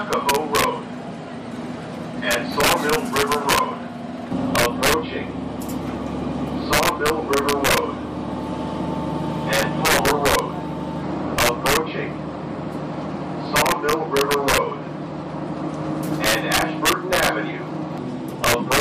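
Violent, sharp cracks burst from the loudest peaks throughout: integer overflow, where a gain pushed about 4 dB too hot wraps around a small fraction of samples to the opposite sign instead of limiting.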